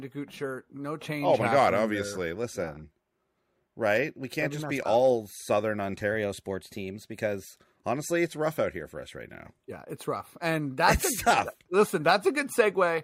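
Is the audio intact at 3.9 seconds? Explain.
Yes, the speech at 3.9 seconds plays through intact, with no dropout, click, distortion or other fault at that moment.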